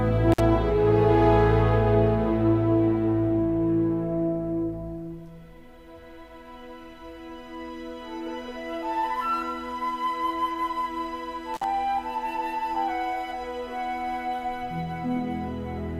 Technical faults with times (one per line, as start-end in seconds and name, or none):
0.32-0.40 intermittent contact
11.54-11.64 intermittent contact